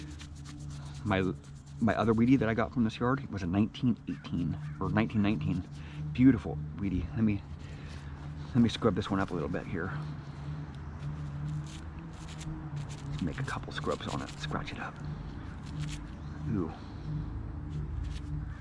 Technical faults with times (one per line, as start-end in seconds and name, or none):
none